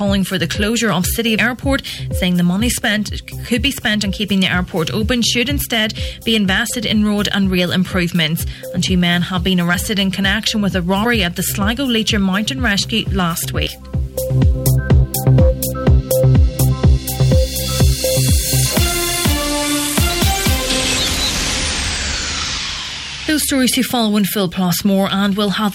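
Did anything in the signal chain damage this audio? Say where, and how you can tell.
Yes. Two stages left their mark.

The converter shows sample clock jitter for the whole clip. A fine, gritty hiss rides on the louder and brighter passages and disappears in the quiet gaps. That pattern points to timing error and not to ordinary noise. Sampling instants wandering by a few microseconds produce an error that scales with how fast the waveform is changing, here landing somewhere around 25 dB below the signal. A noise floor from analogue wiring would stay constant through the silences instead.

The codec or storage stage shows compressed frames skipped at 1.37 s and again at 9.73–9.75 s. At each point the audio lurches forward without a gap of silence. The first jump loses around 400 ms, which fits roughly fifteen frames of 23.2 ms. The second loses about 100 ms, or about four frames. The absence of any silence at the jumps rules out a buffer underrun.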